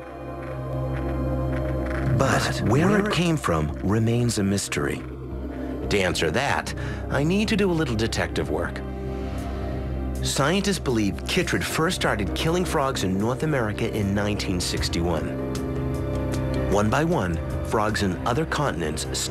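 From 0.73 to 3.11 s a doubled audio track appears: a dry copy trails about a tenth of a second behind, roughly 5 dB quieter, likely from a second, slower capture path.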